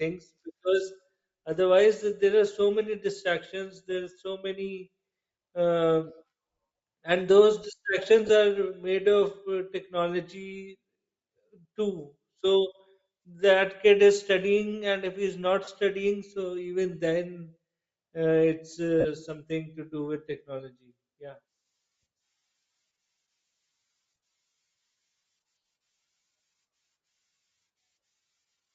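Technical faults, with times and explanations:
Throughout, Bluetooth LC3 compression: the speech has a breathy, grainy edge and a dulled top end, likely from LC3 coding at a low bitrate of about 32 kbps in 7.5 ms frames, where much of the upper spectrum is discarded and refilled with noise.
8.27 to 8.29 s, 15.64 to 15.68 s and 19.00 to 19.06 s, lost LE Audio frames: runs of Bluetooth frames went missing, about 22.5, 30 and 45 ms long, so the decoder reused the last spectrum with scrambled signs. The second falls between "and if he's not" and "studying so even", and the third just before "something to do with".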